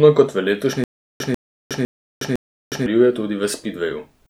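A speech recording where, right after "kot v letošnji", a 143 ms fragment repeats four times from 0.84 to 2.86 s, each burst followed by 363 ms of dead silence at a steady 506 ms cycle. This stutter with silent gaps likely comes from a stalled stream replaying its last buffer, and the missing audio is lost.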